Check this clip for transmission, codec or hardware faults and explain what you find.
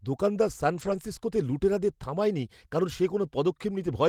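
One fault in this speech clip: lost packets rebuilt from error correction.

From 0.73 to 0.95 s the audio turns rough and noisy without a gap, because the decoder played low-bitrate backup copies in place of lost packets; about 120 ms of rebuilt audio fits roughly six packets.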